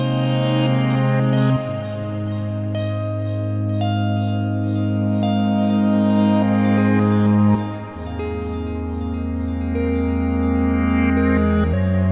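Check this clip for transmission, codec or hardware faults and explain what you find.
No faults can be heard.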